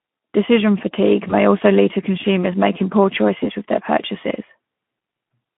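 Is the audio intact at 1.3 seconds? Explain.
No. Around 1.27 to 1.34 s, just before "also lead to consumers", one packet, about 20 ms of audio, went missing, and the speech decoder filled the gap by extending its last pitch and filter at falling gain. The result is a brief stretched buzzy tone or coloured noise that fades, with the voice staying weak or distorted for a few tens of milliseconds after real packets resume.

Underneath that, the whole passage is carried by the Speex codec at a bitrate near 11 kbps, on a line band of 150 Hz to 3.4 kHz. Too few bits for the excitation leave the speech audibly hoarse and noisy at this moment too.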